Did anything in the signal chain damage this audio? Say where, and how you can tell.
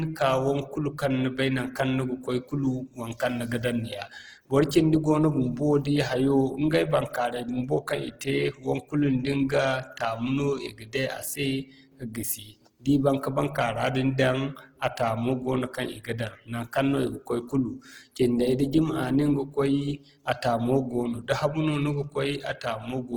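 Yes. Opus compression, throughout, at the codec stage: the speech sounds rough and grainy from noise-filled bands, with sound reaching 20.1 kHz, likely CELT mode near 16 kbps.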